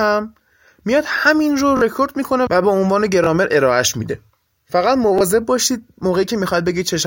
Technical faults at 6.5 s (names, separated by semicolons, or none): none